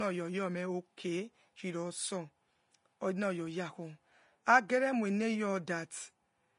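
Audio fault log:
throughout: likely Vorbis compression at a low bitrate near 32 kbps, which removes everything above 10.5 kHz and coarsely quantises treble, leaving the speech audibly hissy and grainy.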